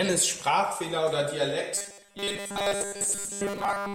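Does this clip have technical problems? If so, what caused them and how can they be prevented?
Yes. From 1.75 s to the end of the clip, the speech turns into a rigid, metallic buzz, robotic sound from repeated short buffers, with a fixed pitch of 200 Hz. That fits a 5 ms chunk being replayed over and over, likely because new audio arrived too seldom, so most of the real signal in that stretch was skipped. A spectrogram would show evenly spaced horizontal lines at multiples of 200 Hz, and the waveform would show one short shape repeating identically. Larger playback buffers and steadier delivery, with a jitter buffer, would prevent it.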